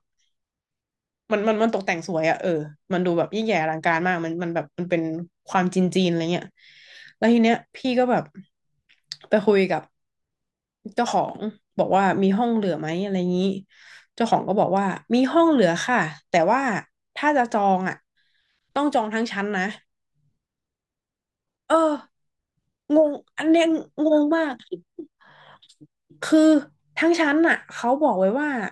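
No technical faults are audible anywhere in the recording.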